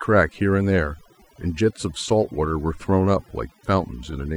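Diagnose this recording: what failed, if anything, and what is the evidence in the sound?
Overdone noise removal at the processing stage runs through the whole speech clip. The background drops and breaks up into twinkling specks. Each frequency band is cut on its own, unlike a gate muting everything at once.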